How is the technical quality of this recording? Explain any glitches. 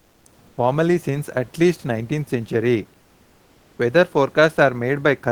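There's one recurring glitch, at the very start. From 0.00 to 0.25 s and again from 0.47 to 0.57 s, you get comfort noise in place of the background. The real room noise, sitting about 35 dB under the speech, is swapped for a flat, featureless hiss that's about 3 to 4 dB quieter. That's likely discontinuous transmission: the sender goes silent when it hears no speech, and the receiver fills the gap with synthetic noise, which fits something like Opus DTX.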